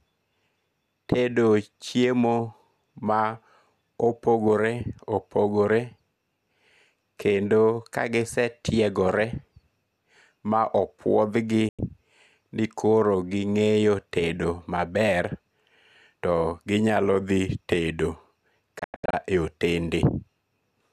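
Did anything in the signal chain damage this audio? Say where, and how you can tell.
Yes, a digital broadcast dropout at the receiver. After "ma opuothgi", 11.69 to 11.79 s fades out in 3 ms. From 18.79 to 19.14 s there are scattered holes. The sound goes truly silent instead of being smeared over, so failed frames were muted rather than concealed.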